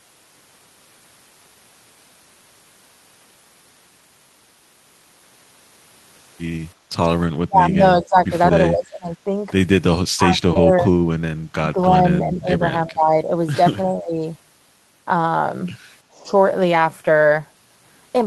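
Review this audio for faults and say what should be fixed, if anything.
Audio missing between chunks at 2.60 s: the sound skips forward with no silence, losing about a tenth of a second. A recorder or processor closing one block and opening the next likely dropped this piece. Prevent it by buffering so block boundaries overlap rather than leave a gap.

Lost packet rebuilt from error correction at 6.45 to 6.59 s (80 ms, which fits four 20 ms packets), 10.55 to 10.57 s (20 ms) and 11.79 to 11.85 s (40 ms): these passages turn rougher and noisier without any gap. The decoder played the low-bitrate copies carried in the following packets. Prevent it by improving network reliability or adding jitter-buffer headroom so originals arrive in time.

Background gated by the echo canceller at 6.75 to 6.91 s: the room sound dips by about 9 dB for a fraction of a second and then recovers. The canceller pulled the microphone down while the loudspeaker was active. 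Prevent it by tuning the canceller's suppression to be less aggressive on residual echo.

Speech suppressed in double talk at 7.47 to 9.32 s, 10.16 to 10.91 s, 11.61 to 13.31 s, 13.84 to 14.22 s and 16.13 to 16.28 s: the speech dips, by around 25 dB in the first stretch and roughly 15 to 20 dB elsewhere. The likely cause is an echo canceller that could not separate the talker from loudspeaker echo while both sides spoke. Prevent it with a canceller that has better double-talk detection, or by improving acoustic isolation between the loudspeaker and microphone.

Short concealed packet loss at 10.53 to 10.57 s: a brief smear occurs where 20 ms of audio never arrived and the receiver extended the preceding sound before blending back into real audio. This falls inside a double-talk dip. Prevent it with a larger jitter buffer and a more stable network path.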